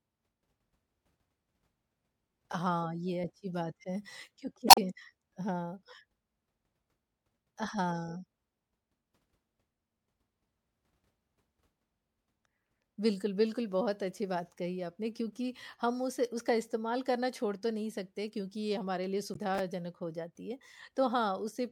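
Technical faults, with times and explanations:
2.51–2.53 s, chunks out of order: a 10 ms slice of sound lands one slot late, so it and its neighbour swap places. Nothing goes missing, but the hard joins at each edge give a quick stutter.
4.67–4.78 s, damaged data in a compressed stream: a stretch of the encoded stream is corrupt, so the decoder misreads those frames and loses its place until it finds a clean frame header again. That comes out as a short blip.
19.31–19.37 s, damaged data in a compressed stream: the same corruption again, shorter this time, with the same brief blip while the decoder resyncs.
19.55–19.59 s, chunks out of order: one 10 ms chunk turns up three chunks late, so the sound briefly jumps forward and then back. You hear a small jumbled flicker.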